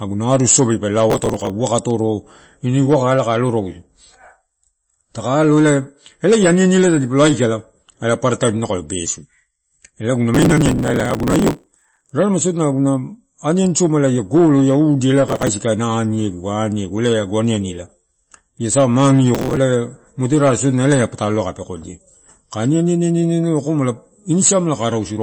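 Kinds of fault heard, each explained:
MP3 compression: The whole clip has a dull, watery quality, and the damage is plainly audible. Nothing comes through above 8.4 kHz, so the speech has a hard treble ceiling. That is the mark of an encoder starved of bits, and it fits a low rate near 32 kbps. The likely cause is MP3 coding. Weak frequency detail flickers in and out between frames, so sibilants turn swirly and onsets blur.
processor overload crackle: Four bursts of gritty tearing break into the speech. The first runs from 1.10 to 1.50 s, right after "arusosobi pe". The longest runs from 10.35 to 12.11 s. Others follow "golo ia udi ela" at 15.28 to 15.48 s and "ia sa" at 19.35 to 19.57 s. The processor missed a long run of very short audio buffers, each about a millisecond or two. Each missed buffer was simply skipped, leaving hard-edged gaps that merge into crackle.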